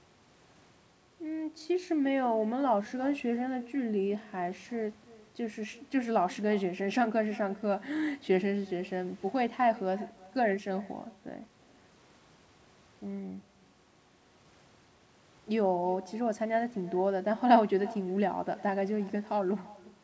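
Throughout the speech, each phrase is followed about a third of a second later by a fainter, thinner copy roughly 22 dB down. That is echo with no canceller: the far end's loudspeaker feeds its microphone, and the returned signal is never subtracted. The audio stops at 8 kHz, which fits a wideband call codec such as G.722.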